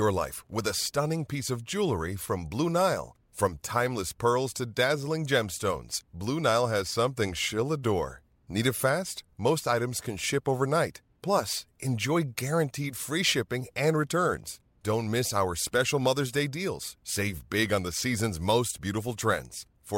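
No technical faults are audible anywhere in this recording.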